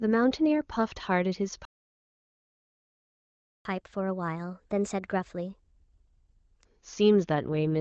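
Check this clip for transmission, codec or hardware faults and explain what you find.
Three faults turn up in this speech clip: a playback stall, a fast catch-up, and an AMR rate drop near the end.

Playback stall, 1.65 to 3.65 s: The player likely ran dry or its output thread was blocked, so nothing reached the speaker. The speech cuts off mid-flow and there is a full two seconds of silence before it resumes.

Catch-up at higher speed, 3.65 to 6.65 s: To win back some of the lost time, the player resamples its backlog and runs it 1.15 times faster. The speech sounds hurried and sits about two semitones higher, then settles back to normal pace and pitch.

AMR rate drop, 7.38 s to the end: A weakening radio link pushes the AMR-WB encoder down to a lower mode and spends the spare bits on error protection. The HD Voice character heard earlier, consistent with 23.85 kbit/s, gives way to a rougher, more synthetic texture that fits 8.85 kbit/s. 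The bandwidth stays the same and there is no gap.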